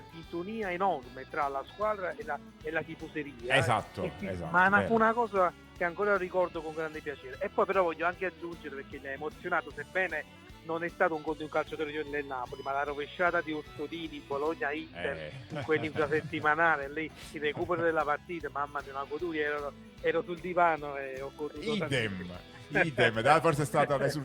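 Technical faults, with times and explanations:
No technical faults can be heard in this clip. There is nothing to list with a time or an explanation.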